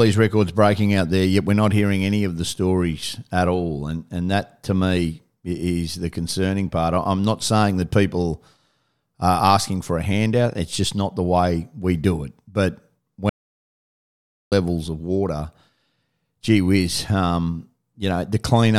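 From 13.29 to 14.52 s the speech drops out to dead silence, no room tone, before resuming at "of water": an audio dropout to silence, likely a lost input link.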